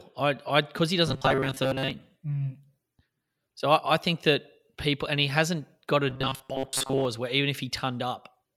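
From 1.07 to 1.91 s and 6.10 to 7.05 s, robotic sound from repeated short buffers gives the speech a fixed 133 Hz metallic buzz, likely from looping a 7.5 ms chunk while most real audio is skipped. Unlike a stutter, it still loosely follows the words.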